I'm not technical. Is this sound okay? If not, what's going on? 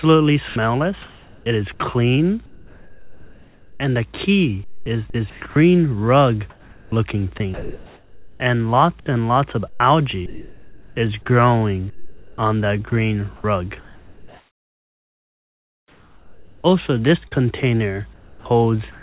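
No. Sound chopped by the voice detector, from 0.48 to 3.8 s, 4.64 to 5.56 s, 6.5 to 17.3 s, and 18.13 s to the end. This is likely a call system that stops sending when it judges the sound too quiet. It cut out about 1.9, 0.44, 5.7 and 0.43 seconds in those stretches and filled the gaps with artificial hiss, so the audio stutters. Separately, the call line passes nothing above 4 kHz, so everything sounds muffled.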